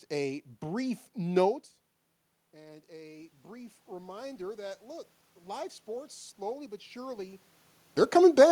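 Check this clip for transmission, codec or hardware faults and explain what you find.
One fault stands out: automatic gain rising. From 2.52 to 5.76 s, after the input drops by about 18 dB, the gain control gradually adds about 6 dB. Voice and room noise swell together, and the waveform envelope and spectrogram noise floor climb in step.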